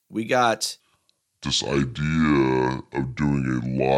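From 0.8 s to the end there's a section at the wrong speed: the speech slows to 0.65x and drops roughly seven semitones, likely from a mismatched clock.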